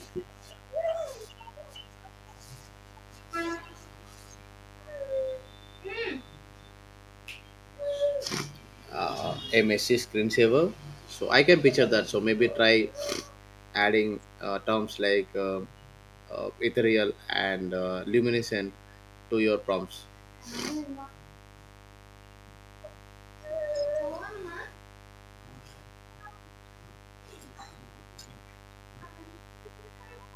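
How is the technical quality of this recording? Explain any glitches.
Two problems stand out: a buzz running under the whole recording, and one short glitch partway through.

The mains buzz is there from start to finish, sitting roughly 25 dB below the speech. It's a 50 Hz supply problem: something like a dimmer, a rectifier or a missing shield is letting sharp switching spikes into the signal twice per mains cycle. Because those spikes are so abrupt, they bring a long ladder of harmonics of 50 Hz with them, climbing up into the kilohertz range. That's why it comes across as a raspy, edgy buzz rather than a smooth low hum.

The second fault is a corrupt frame decoded at about 18.4 s. It's very brief and fairly quiet, peaking somewhere around -35 dBFS, and it sounds like it spans a frame or two of the compressed stream. Some bits in that data got flipped, but the decoder played the frame anyway. 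The misread gains and codes put energy at the wrong frequencies for that instant, so you get a short chirp, blip or burst of noise that doesn't belong to the speech.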